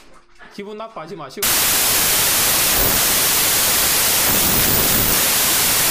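From 1.43 s to the end at 5.91 s the audio turns to loud, harsh noise with the original sound faintly audible underneath, running fast and raised in pitch by a factor of about 1.33. This is a wrong sample width fault. The pattern fits packed 24-bit data being read as 32-bit samples. Each read value straddles byte boundaries, so most samples mix unrelated bytes. Only occasional alignments preserve the signal's high-order bits, and the sound is consumed four bytes at a time instead of three.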